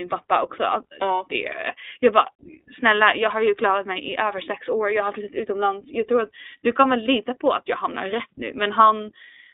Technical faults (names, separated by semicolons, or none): iLBC codec